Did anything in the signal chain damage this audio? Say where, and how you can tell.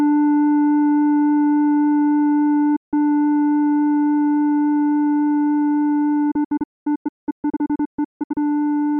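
Yes. A digital broadcast dropout mutes the music at 2.76 to 2.94 s and again in scattered holes from 6.31 to 8.38 s. This is a reception fault in the digital radio path. The receiver stopped getting decodable frames and muted with a quick 8 ms fade. The first gap lasts 160 ms, about five frames. The second stretch loses 1.28 s across roughly 2 s, with the longest silent run 224 ms.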